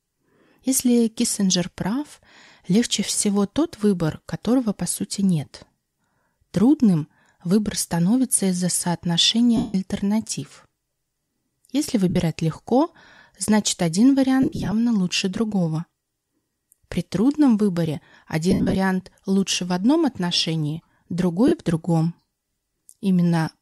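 At 9.57 to 9.75 s, 12.10 to 12.16 s, 14.42 to 14.73 s, 16.50 to 16.53 s, 18.51 to 18.75 s and 21.48 to 21.52 s, the speech briefly turns into a noisy smear. These are lost LE Audio frames. At 14.42 s the loss falls between "легко значит один" and "лучше другого" and is scattered over 300 ms, with the longest gap around 40 ms. At 18.51 s it falls between "трудном выборе" and "лучше в одном отношении" and is spread over 240 ms, with a run of about 70 ms. The last one comes just before "в другом". When frames go missing, the LC3 decoder fills each gap by replaying the last good spectrum with randomised phase signs. The tones of the voice lose their pitch and come out as hiss-like texture. Over the longer runs that filler fades toward quiet. The light lossy compression underneath does only slight damage.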